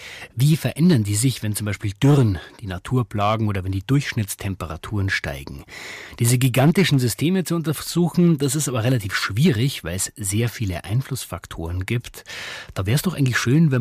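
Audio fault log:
Throughout, hard clipping: the speech reaches a stage that cannot pass its level, pushed about 7 dB beyond that limit, so the peaks are sliced flat wherever the waveform tries to exceed full scale. Only a small share of samples, under one percent, are affected, but each flattened top throws energy into high harmonics that were never in the speech, heard as a gritty crackle riding on the loudest moments of the speech.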